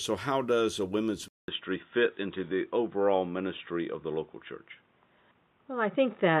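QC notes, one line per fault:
1.28–6.4 s, input switched to a poorer device: right after "how does a women's", about 200 ms of silence, then the sound turns dull and boxy with nothing above 3.8 kHz, which likely comes from a switch to a narrower-band microphone or headset profile. Loudness stays roughly the same, with faint new background noise far below the signal. On a spectrogram there is a short blank gap, then a hard ceiling at 3.8 kHz and a fresh low noise floor. The waveform shows the dropout but little change in amplitude.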